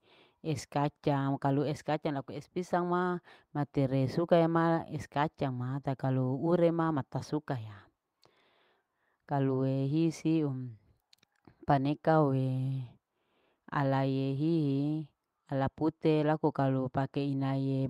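No technical faults can be heard anywhere in this speech recording, so there are none to describe in time order.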